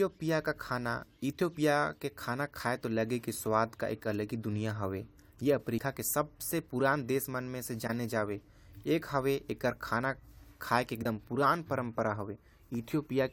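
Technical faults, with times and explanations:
5.77–5.82 s and 11.02–11.05 s, compressed frames skipped: whole frames of the compressed speech never reach the output, so the audio jumps ahead by roughly 70 ms just before "के सबसे पुरान देश" and by roughly 50 ms at the second point. The waveform shows an abrupt envelope discontinuity with no gap, and the spectrogram shows harmonics that shift suddenly.
7.87–7.90 s, corrupt frame decoded: straight after "पुरान देश म से", a single damaged frame is decoded anyway. Misread gains and codes scatter energy at wrong frequencies for about one frame's length, producing a brief burst peaking around -20 dBFS. On a spectrogram this appears as a narrow vertical patch of misplaced bands that breaks the speech harmonics. The waveform shows a short spiky burst unrelated to the surrounding envelope.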